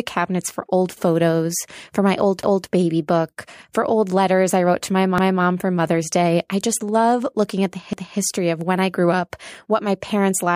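At 2.43, 5.18 and 7.93 s there's overlapping chunks: each 2.5 s block starts 250 ms before the last one ends, so that slice replays. You hear stutters right after "photos for my old", "I wrote to my" and "love looking at the".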